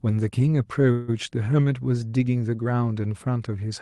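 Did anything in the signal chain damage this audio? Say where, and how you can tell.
Yes. At the network and jitter-buffer stage of the call path there is a call audio freeze from 0.91 to 1.10 s. The speech stops and the last sound is stretched into a fading buzz for about 166 ms. Then the speech resumes exactly where it broke off, and everything after it runs 166 ms late. That is the likely result of packets arriving late and the buffer running dry. It differs from packet loss because nothing is skipped.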